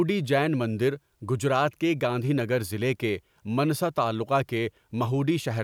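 No technical faults can be heard anywhere in this speech recording. There is nothing in it to mark at any point in time.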